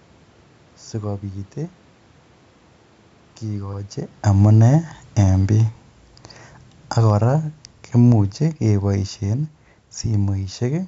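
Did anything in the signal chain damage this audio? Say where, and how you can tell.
Yes. From 3.45 s to the end, speech and room noise sink together. This is automatic gain falling in the call processing: its gain control judged the input too loud, or its background noise too strong, and lowered gain gradually.

At 3.73 s and 7.78 s, a 50 ms stutter plays twice. These are overlapping chunks at the buffer stage, where each 4 s chunk starts before the previous one ends.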